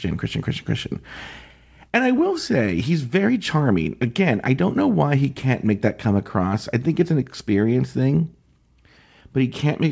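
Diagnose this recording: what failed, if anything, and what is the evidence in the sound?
Nothing failed in this recording.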